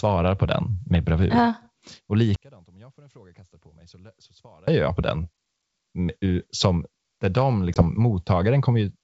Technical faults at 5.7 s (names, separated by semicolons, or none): none